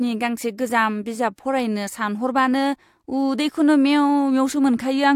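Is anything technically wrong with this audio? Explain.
No, nothing here stands out as a technical problem; the speech comes through without any faults worth pointing to.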